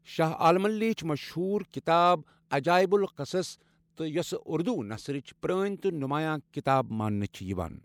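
At 7.32 to 7.34 s, the transform codec spread quantisation noise across a whole block in which a sharp speech attack fell late, so noise sized for the loud onset filled the quiet before it. This pre-echo is heard as a 20 ms hiss leading a softened, smeared attack.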